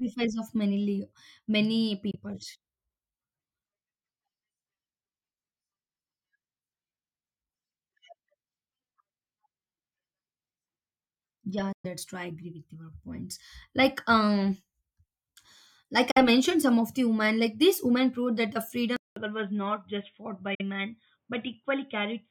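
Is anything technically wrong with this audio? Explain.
Yes, there are two kinds of fault. Bluetooth dropout: short silent holes at 2.11–2.16 s, 11.72–11.86 s, 16.11–16.18 s and 20.55–20.62 s, likely from packets dropped before reaching the headphones, with speech resuming as if it had played on. Input switched to a poorer device: at 18.96 s a 200 ms silence, then to the end the speech turns dull and slightly quieter, with nothing above 3.8 kHz and a faint new noise floor, likely from a change to a narrower-band microphone.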